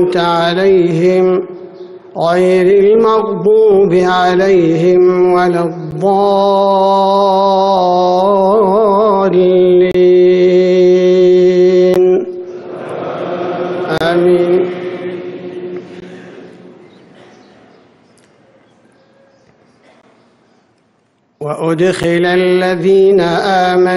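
Gaps between stream segments occur at 5.91 s, 9.91 to 9.95 s, 11.94 s, 13.98 to 14.01 s, 16.00 s, 20.02 s and 22.03 s, falling on a 2-second segment grid. At each boundary, the timestamps of adjacent segments don't quite meet, and the player fills the hole with silence, from about 8 ms up to about 30 ms. Each is heard as a brief, hard-edged dropout in the sound, with nothing missing on either side.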